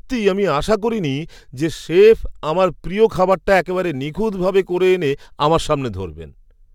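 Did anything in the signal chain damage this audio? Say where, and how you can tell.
Yes. Crude rate conversion at the sample-format stage, 3.32 to 5.15 s: a gritty, inharmonic fizz about 30 dB below the speech. It fits unfiltered 48 kHz to 44.1 kHz sample dropping.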